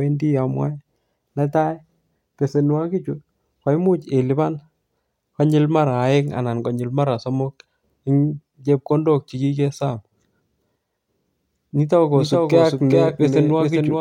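At 12.13 s a doubled audio track begins and runs to the end. A second full-band copy of the speech trails by roughly 400 ms, somewhat quieter. It starts abruptly, with no decay or room colour. The likely cause is a slower duplicate capture path.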